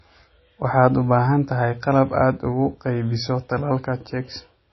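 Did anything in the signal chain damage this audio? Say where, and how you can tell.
Yes, at the codec stage. The speech has nothing above 5.8 kHz throughout. This likely is low-bitrate audio saved at a high bitrate: an MP3 near 24 kbit/s re-encoded at 320.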